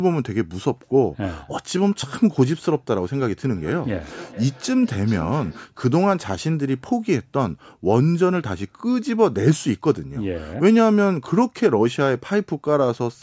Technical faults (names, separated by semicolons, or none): feedback echo between two devices